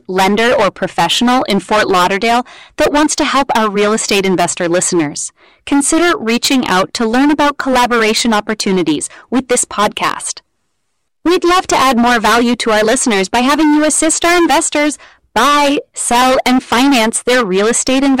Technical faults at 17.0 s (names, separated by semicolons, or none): hard clipping